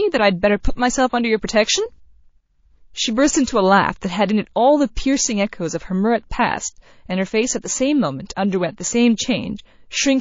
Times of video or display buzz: 0.00-2.00

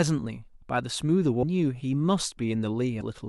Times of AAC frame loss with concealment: none

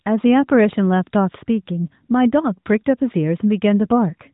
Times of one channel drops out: none

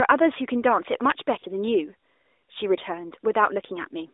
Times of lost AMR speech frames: 1.40-1.44

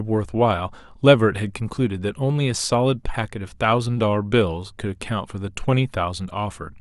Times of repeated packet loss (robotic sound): none

